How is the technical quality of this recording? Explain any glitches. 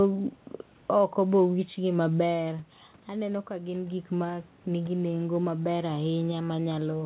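The recording has one glitch: a gradual gain rise from 2.37 s to the end. The audio is band-limited, with nothing above 4 kHz, as expected from a G.711 telephone-grade call path.

From 2.37 s, just after "oko be owichgi", automatic gain rising begins and continues to the end. Around 2 s the talker moves away, dropping the input by about 9 dB. The gain control compensates slowly, so voice and room noise swell together.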